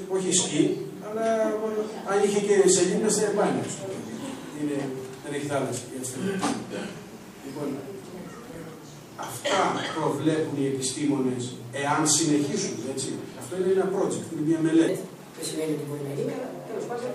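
At 8.44 to 8.58 s and again at 13.29 to 13.37 s, short irregular bursts of scratchy crackle cut through the audio: loose connector crackle, where a worn or dirty contact keeps making and breaking. Unlike steady clicks or dropouts, the chopping is ragged and uneven.

From 14.88 s to the end, a section at the wrong speed plays 1.16 times too fast, pitched up by about three semitones and sounding hurried. The likely cause is playback against the wrong clock. Speed and pitch rise together, which a pitch-shift alone would not do.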